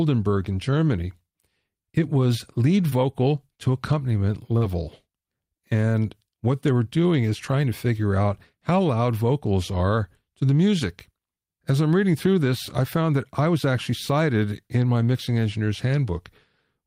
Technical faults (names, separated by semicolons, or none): short concealed packet loss